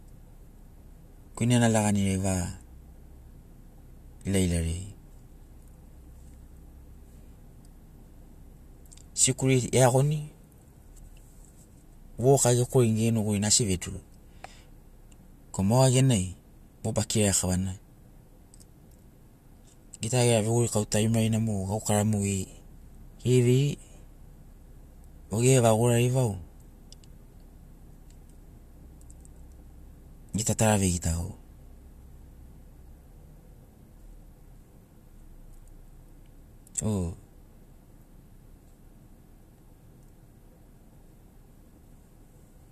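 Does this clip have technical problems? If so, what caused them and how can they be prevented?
No, nothing in this speech recording stood out as a technical problem on listening, so there is nothing here that needs preventing.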